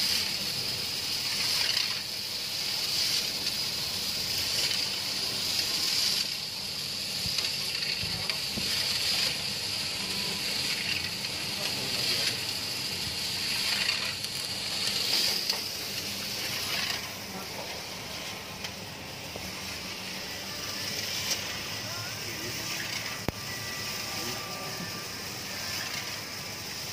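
At 3.30 s there's a single sharp tick, and another at 16.46 s. Both are bit error spikes: one sample got a flipped bit somewhere in memory or on a digital link, so its value jumped by a power of two and snapped straight back. The first peaks around -22 dBFS, the second louder at about -16 dBFS. Each is a broadband click with nothing to do with the surrounding sound.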